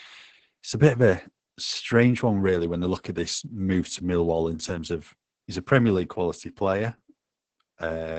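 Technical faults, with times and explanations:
Throughout, Opus voice compression: the speech has nothing above about 8.5 kHz, consistent with wideband SILK coding. The excitation is coarsely quantised, making the speech muffled, hoarse and slightly robotic. The heavy damage fits a bitrate near 10 kbps.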